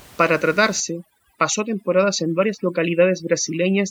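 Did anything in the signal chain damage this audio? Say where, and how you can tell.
Yes. From 0.8 s to the end, the call-processing stage applies overdone noise removal. The room noise, about 26 dB below the speech until then, drops and breaks up into twinkling specks. The suppressor cuts every frequency band it judges close to the noise estimate, taking quiet speech detail with it. On a spectrogram, the background becomes patchy isolated dots, and speech harmonics are ragged and gapped.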